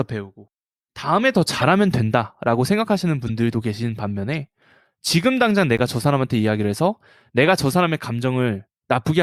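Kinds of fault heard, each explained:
Corrupt frame decoded: Compressed frames arrived with flipped bits and were decoded anyway. Misread gains and codes put energy at the wrong frequencies. The speech carries four such bursts: 1.58 to 1.64 s, 3.27 to 3.30 s, at 4.34 s, and 5.77 to 5.80 s. Each spans one or two frames. They sound like short chirps or blips over the speech. The first is loudest, near -10 dBFS. The later ones are quieter.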